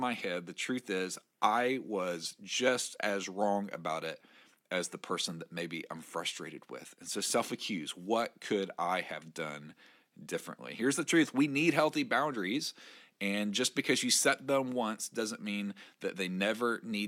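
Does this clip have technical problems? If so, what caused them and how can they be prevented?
No, there are no technical problems in this clip.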